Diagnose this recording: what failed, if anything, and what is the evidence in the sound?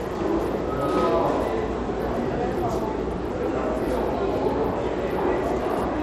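Throughout the recording the top end is thin and unsteady, with treble that drops out and flickers, and a gritty, grainy noise with aliased edges riding on the sound. The damage is plainly audible from start to finish. The stage is the codec, likely Bluetooth SBC compression at a small bit pool, consistent with roughly 96 kbps. SBC splits the signal into a few wide sub-bands and starves the weak upper ones of bits, coarsely quantising the rest.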